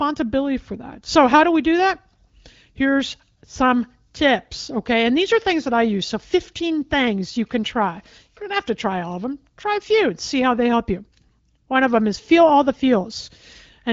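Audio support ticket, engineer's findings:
No faults found; speech carried over the AMR wideband (HD Voice) codec with only light coding texture, band-limited to nothing above 7.6 kHz, which fits one of the higher AMR-WB rates.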